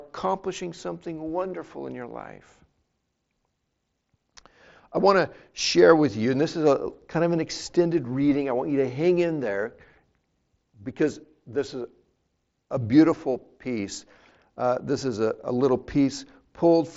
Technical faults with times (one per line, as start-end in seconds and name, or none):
none